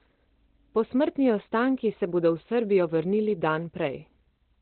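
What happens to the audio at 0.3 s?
At 0.3 s the speech is muffled and hoarse, and it stays that way for the whole clip rather than changing at that point. Nothing reaches above about 4.2 kHz, and the tone is rough, which likely comes from Opus compression running in its speech (SILK) mode at a very low rate, on the order of 12 kbps, where the encoder narrows the band and models the voice coarsely. The lack of swirling, watery MP3 artefacts sets it apart from that codec.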